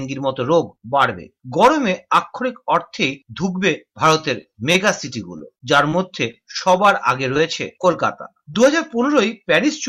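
From 4.41 to 4.75 s the sound turns choppy, with tiny pieces missing in quick succession. This is repeated packet loss (robotic sound). Several short holes, the longest about 13 ms, were each bridged by stretching the preceding audio before the next dropout arrived.

Between 5.38 and 6.61 s, and again from 7.34 to 8.54 s, brief ticks and small smears break up otherwise clear sound. These are scattered short gaps: a handful of isolated lost packets, each no longer than about 20 ms, were patched by continuing the last sound.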